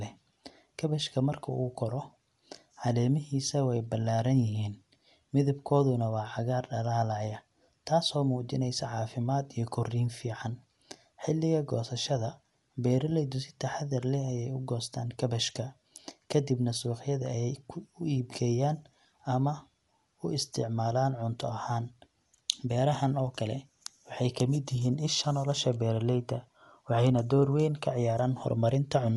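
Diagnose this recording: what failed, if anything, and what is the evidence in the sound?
The speech sounds dull and band-limited throughout, with nothing above about 11.4 kHz and a rough, fluttering noise hanging around tonal parts. This points to the codec stage, likely Dolby Digital compression at a low rate, consistent with roughly 64 kbps. The encoder narrowed the band and starved many frequency lines of bits, which the decoder filled with noise.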